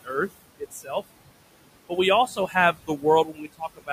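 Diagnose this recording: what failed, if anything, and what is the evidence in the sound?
The failure sits in call processing, at the noise suppressor, and you can hear noise suppressor artifacts right through the speech. The room noise, sitting about 16 dB below the voice, gets pulled down by about 21 dB in the gaps and then bobs back up under the talking. The suppressor is gating band by band, frame by frame.

There's also speech cut by the noise suppressor at 0.59 to 0.9 s, 2.27 to 2.55 s, 2.73 to 3.04 s and 3.25 to 3.9 s. The suppressor mistook quiet parts of the voice for noise and turned them down. The drops go to about 17, 12, 15 and 21 dB. Each of the first three loses roughly 150 ms of sound, and the last one swallows around 400 ms, so the end of the clip sounds swallowed.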